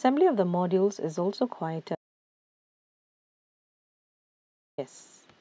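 The input feed was most likely lost at 1.95 s, through a disconnected device, a broken link or an accidental mute, while the recorder kept writing silence until 4.78 s. This is an audio dropout to silence: the speech stops abruptly mid-flow and resumes just as suddenly, and for roughly 2.83 s in between there is silence with no room tone or noise floor at all. Whatever was spoken during that stretch is simply gone.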